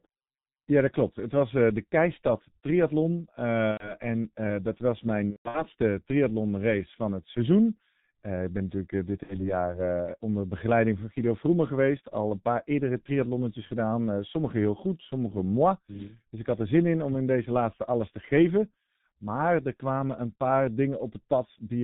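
Throughout, the speech sounds muffled and hoarse with smeared consonants and nothing above 4 kHz, the signature of heavy G.723.1 codec compression at around 6.3 kbit/s.

At 3.71 to 3.94 s, 5.30 to 5.66 s and 9.23 to 9.54 s, the speech stretches into fading buzz or coloured noise. This is VoIP packet loss concealed by the speech codec, which bridges about 90 ms, 210 ms (in bursts up to 150 ms) and 60 ms of missing audio.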